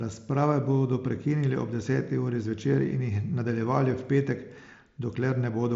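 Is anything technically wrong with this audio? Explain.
No, nothing here is technically wrong: this speech comes through a Bluetooth mSBC headset link, wideband up to about 8 kHz, with just the faint graininess on louder moments that this codec brings.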